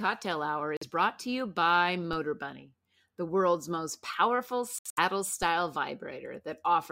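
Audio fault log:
0.77–0.83 s and 4.79–4.99 s, Bluetooth dropout. The sound cuts to silence, then resumes as if it had kept playing. The first hole is about 46 ms, just before "brought to you by". The second comes after "the world's most powerful": about 139 ms lost across 186 ms, longest gap 70 ms. Packets likely missed their deadline to the headphones.
2.13 s, DC step. Just after "brought to you by", the waveform's zero line jumps suddenly. That jump is heard as a low thump or click. The offset then decays away, as a 20 Hz high-pass would drain it. The speech itself continues unchanged.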